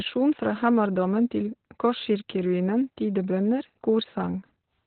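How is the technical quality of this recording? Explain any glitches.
The technical quality is poor, with Opus voice compression damaging the speech from start to finish. The codec is running in its SILK linear-prediction mode at narrowband, a setting that fits a very low bitrate of around 8 kbps. It discards everything above roughly 4.4 kHz and codes the excitation signal coarsely. The speech therefore sounds muffled and telephone-like, with a hoarse, slightly robotic texture and heavy codec damage throughout the clip.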